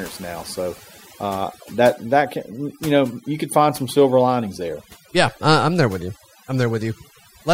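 Throughout the speech, overdone noise removal is at work: the noise reduction was set far too aggressively, shutting off any frequency band close to its noise estimate, taking softer parts of the voice with them. The background drops and breaks up into twinkling specks.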